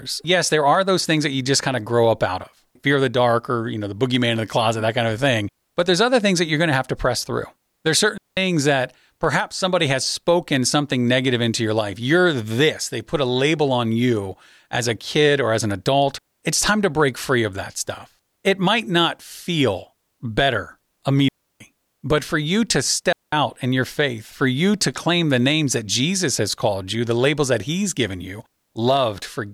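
Digital wireless dropouts hit this speech clip at 8.18 s, 21.28 s and 23.13 s. Each is a clean hole of near silence lasting about 0.19 s, 0.32 s and 0.20 s, where the receiver muted after losing link data, with no noise burst around it.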